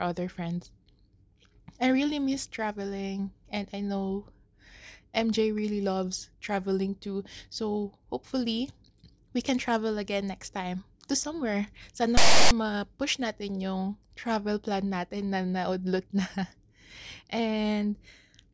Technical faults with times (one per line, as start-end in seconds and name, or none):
12.17-12.51 file tags played as audio